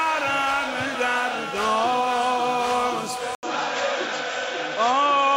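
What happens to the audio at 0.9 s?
Nothing happens to the audio at 0.9 s; it plays through that moment intact, with no break or disturbance.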